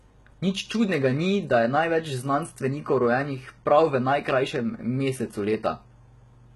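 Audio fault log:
Throughout: HE-AAC compression, heavy. The speech has gritty, metallic treble and lispy s sounds. The top band is likely rebuilt from copied lower bands, so its harmonics misalign. The damage fits a bitrate near 16 kbps.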